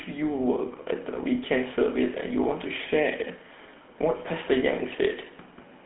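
From start to finish the speech has a buzzy, gravelly roughness, clearly audible, with a thin, boxed-in tone. Almost nothing sits below about 200 Hz or above 3.5 kHz, and nothing above 3.9 kHz. This is GSM full-rate codec damage. The coder keeps a model of the vocal tract and drives it with a sparse train of regularly spaced pulses, which fits a 13 kbps stream. That coarse excitation is what makes the voice grate.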